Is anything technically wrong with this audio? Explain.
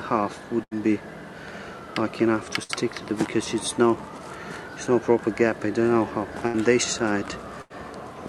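Yes. Four bursts of packet loss occur, at 0.63–0.73 s, 2.63–2.71 s, 6.47–6.56 s and 7.62–7.72 s. Each time, 60 to 80 ms of audio went missing and the receiver stretched the last sound to cover the gap, fading it out. The patch is heard as a brief buzz or hiss, followed by a jump ahead. On a spectrogram, frozen, smeared bands fade out and then give way abruptly to fresh content. On the waveform, each event looks like a repeating, decaying envelope.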